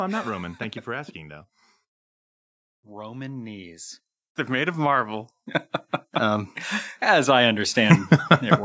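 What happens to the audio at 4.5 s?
At 4.47 s, automatic gain rising begins and runs to 5.36 s. The gain control judged the input too quiet and raised its level gradually. The speech and the background noise swell together by about 4 dB over that span.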